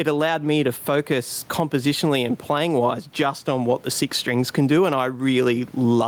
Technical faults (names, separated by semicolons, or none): gain pumping